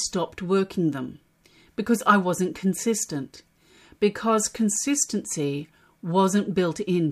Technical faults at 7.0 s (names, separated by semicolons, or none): none